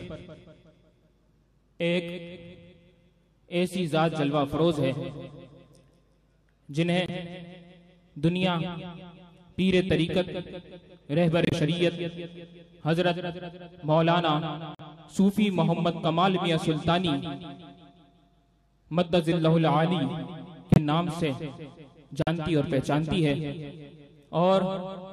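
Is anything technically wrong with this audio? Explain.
Yes. Corrupt frame muted, at 7.06, 11.43, 14.75, 20.72 and 22.22 s: the decoder rejected damaged compressed frames and the player substituted silence, so the sound cuts off abruptly into gaps of 36 to 108 ms, then resumes without losing timing.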